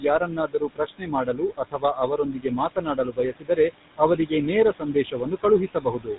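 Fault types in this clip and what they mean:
Noise suppressor artifacts, throughout: band-by-band gain cuts the steady background by about 18 dB, so noise dips between phrases and swells back under speech.
GSM full-rate codec, throughout: a pulse-excited vocal-tract model, consistent with 13 kbps GSM full rate, removes everything above 4 kHz and leaves a plainly audible buzzy, gravelly roughness.
Speech cut by the noise suppressor, 0.0 to 3.58 s, 4.79 to 5.14 s and 5.68 to 6.18 s: the suppressor mistakes quiet speech for noise, turning it down by up to about 19 dB.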